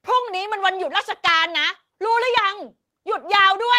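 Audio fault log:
No audible faults detected.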